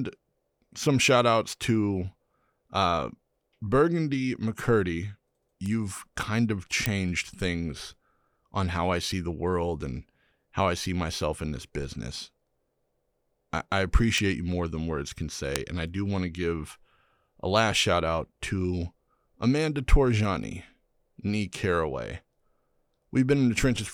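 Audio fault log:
5.66 s, 6.86 s, 14.18 s, 15.56 s: bit error spike. Four isolated sharp ticks, each a broadband click with no relation to the speech around it. They fall just before "kind of", between "kind of" and "things on how I", at 14.18 s, and right after "more than words can". Peaks reach about −22, −4, −10 and −4 dBFS. Each tick is a single flipped bit, which throws one to three samples off by a power of two before the waveform snaps back.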